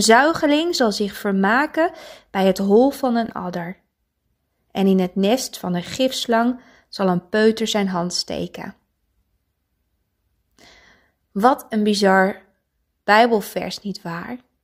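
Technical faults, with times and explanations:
3.26–3.31 s, frames out of order: just after "bij het hol van", two adjacent 23.2 ms blocks play swapped, giving a brief garbled flutter. No time is lost.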